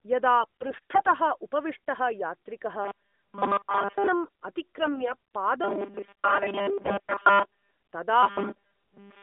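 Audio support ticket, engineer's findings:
AMR bit errors, 0.40–1.14 s, 4.80–5.15 s and 6.84–7.12 s. Hoarse, scratchy, gargly speech. Pitch and level roughly hold, unlike a dropout or buzz. Damaged less-protected frame bits pass the checksum and misplace excitation pulses, fine gain and spectral values. Error rate of a few percent.

Robotic sound from repeated short buffers, 2.82–4.09 s and 5.64–7.71 s (overlaps the 6.84–7.12 s bit errors). Rigid metallic buzz at a fixed 200 Hz that tracks the words only loosely. Likely cause: playout starved, with the last 5 ms looped and most real audio skipped. The imposed fixed pitch distinguishes it from the codec errors' gargle.

Line band 200 Hz to 3.7 kHz with light codec colouring, which fits AMR-NB at 12.2 kbps.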